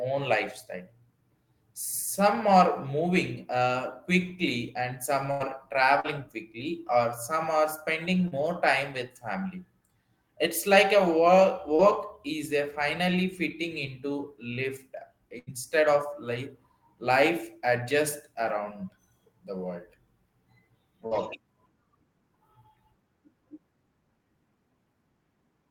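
At 5.31 to 5.43 s a burst of packet loss removes about 80 ms of speech. The receiver stretches the last sound for roughly 85 ms as a held, fading tail, then the speech resumes further on with that stretch skipped.

Short concealed packet loss follows at 6.00, 8.28 and 11.75 s. Each loses about 40 ms, which is filled from the preceding sound and blended back in, so it comes across as a brief smear or wobble rather than a gap.

A second burst at 15.39 to 15.50 s repeats the pattern: a dying held sound, then a jump past missing material. A last short concealment at 21.07 s gives one more quick smear.

The bursts stand out from the short losses by their audible fade and the content they skip. The short losses leave no obvious hole.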